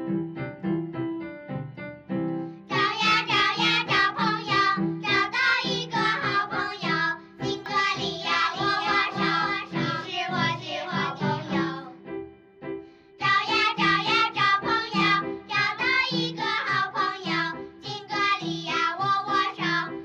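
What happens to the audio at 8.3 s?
A doubled audio track, 7.66–11.54 s: a copy about 5 dB quieter, likely from a slower second capture, trails half a second behind, duplicating every spectrogram pattern.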